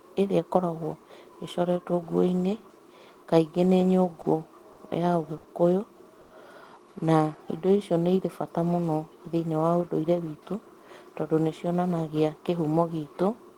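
Packets arrived late four times in a row, each time draining the jitter buffer before the next one was due. These are short stalls from a late packet. At 4.21 s, 4.72 s, 5.37 s and 6.21 s the receiver stretched the last bit of speech while it waited, filling 30, 50, 60 and 90 ms. Nothing is lost. The speech picks up exactly where it stopped, but each stall holds a sound too long, with a faint buzzy or dipped quality. The stalls grow longer as the delay builds.

From 7.37 s to 8.01 s the receiver rebuilt its reserve through a jitter buffer slow-down. It repeated single pitch periods and slivers of pause over and over, adding 70 ms of audio. The speech plays at about 90 percent of its normal speed while its pitch stays put, so sounds become drawn out and slightly sluggish.

Between 9.89 s and 11.03 s the opposite happened in a jitter buffer speed-up. The buffer was holding more audio than it needed, so the receiver trimmed out short pieces of one or a few pitch periods in quick succession, removing roughly 150 ms in total. 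The speech runs at about 112 percent of normal speed with unchanged pitch, and that stretch sounds hurried.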